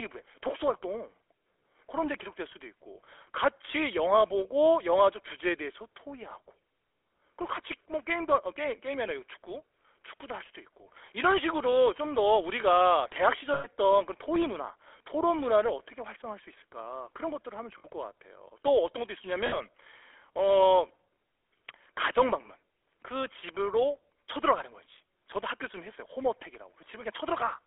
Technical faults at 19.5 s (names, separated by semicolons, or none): GSM full-rate codec; lost GSM frames